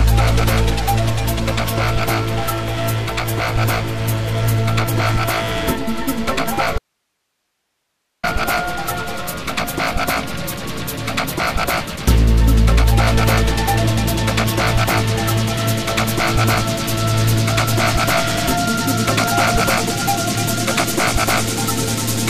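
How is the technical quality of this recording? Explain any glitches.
The recording has one fault: an audio dropout to a faint residue at 6.78 to 8.23 s. The sound cuts out abruptly for about 1.45 s, leaving only hiss roughly 55 dB down, then resumes mid-flow. The likely cause is a brief source loss while the downstream path stayed live.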